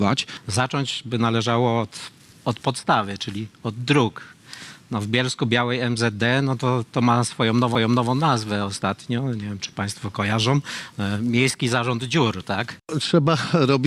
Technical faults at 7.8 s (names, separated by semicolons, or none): CD skip